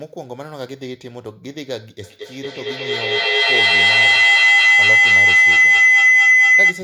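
Feedback howl starts at 2.03 s and runs to the end of the clip. Two devices in the same room are joined through one call, so sound from one loudspeaker reaches the other microphone and comes back louder on each pass. The repeats, pulsing roughly every fifth of a second, narrow into a piercing tone around 2 kHz that climbs to about 17 dB above the speech and never breaks off.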